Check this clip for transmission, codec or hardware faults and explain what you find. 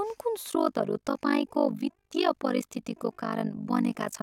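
One fault is present: overlap-add ripple, running from 0.5 s to the end of the speech. The audio was split into windowed frames and rejoined with an overlap whose windows don't sum to a steady gain, so the level dips by about 60 dB once per frame, around 50 times a second. The result is a harsh, buzzy, robotic flutter riding on the speech. Unlike mains hum at a similar rate, it adds no tone of its own. It chops the existing sound in a strictly regular rhythm.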